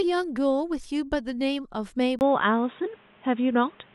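Speech clip, and at 2.19 s it abruptly changes character: after a brief gap of about 20 ms, everything from there to the end sounds duller and boxier, with nothing above 3.8 kHz. The level shifts by roughly 5 dB, and a new noise floor sits about 35 dB under the signal. That pattern points to an input switched to a poorer device, likely the recording path jumping to a different mic or a headset's narrowband call profile.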